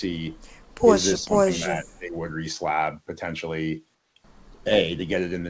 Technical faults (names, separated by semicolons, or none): speech suppressed in double talk; comfort noise in place of the background